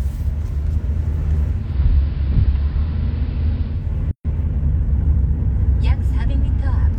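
At 1.48 s the audio slides over from digital radio to analogue, a classic digital radio blending to analogue. The receiver lost the digital stream and cross-faded, over roughly 0.3 s, to the AM broadcast of the same station. The level stays put, with a hiss floor sitting roughly 35 dB down. It blends back to digital at 3.94 s.

Shortly after, at 4.11 s, there's a playback stall. The sound just cuts out mid-flow for about 136 ms, dead silence, before picking up again at 4.25 s. It's a short hole, but it's clearly audible as a hiccup. The likely cause is the player running dry on data, or its output thread getting held up, so it had nothing to send out until it recovered.

Right after the gap, from 4.25 s to 5.59 s, you get time-compressed catch-up. The player is clawing back the delay from that stall by snipping out tiny slices and cross-fading across them, so the audio runs at about 1.1 times normal speed. 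The pitch stays where it should be, so it doesn't sound chipmunky. It just feels a little rushed.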